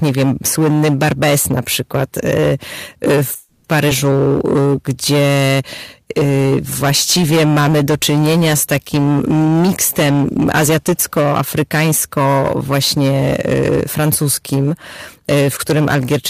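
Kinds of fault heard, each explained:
Hard clipping: speech driven about 14 dB past full scale, so roughly a fifth of samples sit flat-topped; waveform shows squared peaks, spectrogram smeared high harmonics, heard as harsh fuzz.
Call audio freeze: at 3.35 s sound stalls into a fading 290 ms fill, likely from held-up packets emptying the buffer; spectrogram shows a smooth decaying smear before speech resumes unbroken.
Skip ahead: at 3.88 s roughly 70 ms of speech vanishes, the two sides spliced almost directly; waveform shows an abrupt joint, spectrogram a sudden formant jump.
Jitter buffer slow-down: 4.28 to 4.90 s runs at 91% speed, same pitch, 61 ms added by repeating pitch periods; waveform shows duplicated cycles, spectrogram stretched harmonics.
Jitter buffer speed-up: 9.40 to 11.27 s at 112% and 11.77 to 12.34 s at 107%, pitch periods cut out; spectrogram shows compressed syllables with harmonics unchanged, sounding hurried.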